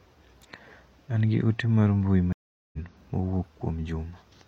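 A speech clip in which the sound drops out just after "gi ote mar mbui", going silent for about 0.4 s from 2.33 to 2.78 s, then resumes roughly a third of a second further on, easing in. This is a stream reconnect: the connection broke and a fresh decoder restarted mid-stream.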